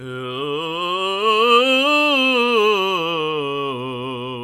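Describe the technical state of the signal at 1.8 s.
At 1.8 s the music plays through intact, with no dropout, click, distortion or other audible fault at that moment.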